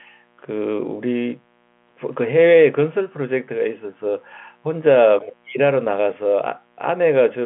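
Throughout the speech, mains interference at 60 Hz leaks into the signal path as sharp spikes, leaving a steady, raspy buzz roughly 40 dB down beneath the telephone-band audio.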